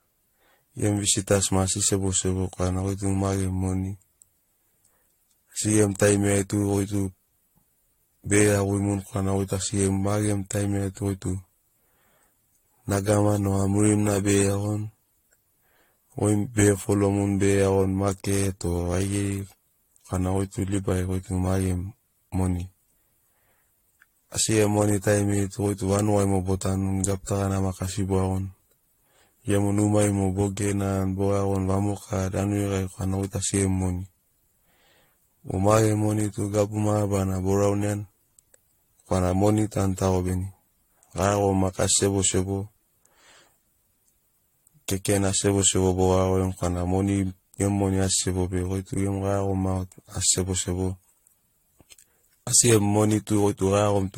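From the start, the speech sounds swirly, smeared and hollow, with blurred attacks. That is generation loss, likely from about five successive AAC-LC passes at roughly 64 kbit/s. Between 6.27 and 7.73 s, a block size mismatch (truncated) discards each block's tail, producing a 46.9 Hz buzz consistent with 1024-sample blocks. The pace stays essentially normal, and the waveform shows regular discontinuities about 21 ms apart.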